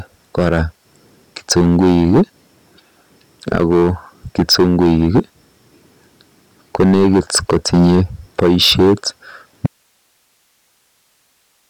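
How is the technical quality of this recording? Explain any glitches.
The technical quality is poor. Two faults affect the speech.

Hard clipping runs through the whole clip. The signal was pushed about 9 dB past what some stage in the chain could pass. Its peaks were sliced flat, and roughly 7% of samples were cut at that stage's limit. Those squared-off tops generate harmonics high in the spectrum. The result is a harsh, fuzzy grit on every louder syllable, not just an occasional crackle.

An audio dropout to a faint residue begins at 9.67 s and lasts to the end. The speech cuts out abruptly, with no fade. What remains is plain hiss, roughly 45 dB below the speech level. The likely cause is a break upstream while the later part of the path stayed live, so its own noise floor carried on after the wanted signal stopped.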